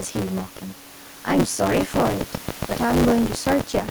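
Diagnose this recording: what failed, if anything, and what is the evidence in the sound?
Buffer tearing at the driver/buffer stage runs through the whole clip. A steady robotic buzz at 93.8 Hz rides on the speech and is gone whenever the speech stops. That rate fits a 512-sample buffer. Writer and reader have slipped, so roughly two fifths of each period replays audio from about 20 ms earlier, with hard joins at both edges. On a waveform this shows as sharp discontinuities repeating about every 10.7 ms. A spectrogram shows a comb of sidebands spaced near 94 Hz, present only under speech energy.

A train of clicks runs from 1.8 s to 3.9 s, some fifteen near-identical ticks at a regular 7.2 per second. They peak about 15 dB above the signal and stay audible in the pauses, where they stand clear of room noise sitting about 23 dB below the speech. On a spectrogram they are thin vertical broadband lines at even spacing. 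The waveform shows matching isolated spikes. The likely cause is electrical interference or a struggling interface at the analogue wiring or converter stage.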